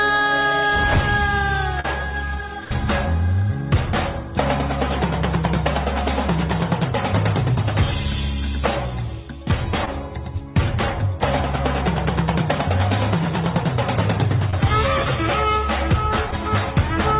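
At 1.80 to 1.86 s, short concealed packet loss leaves a brief smear where roughly 40 ms went missing and was patched by extending the preceding sound, then blended back. At 2.64 to 2.75 s, a burst of packet loss lasts longer: the filled stretch becomes a held buzz or fading hiss, and about 14 ms of the sound is skipped when playback resumes, unlike the short gaps. Further short concealed losses, each about 20 ms, cause quick wobbles at 9.85 to 9.89 s, 14.51 to 14.55 s and 16.31 to 16.34 s. The narrowband call path leaves nothing above 4 kHz.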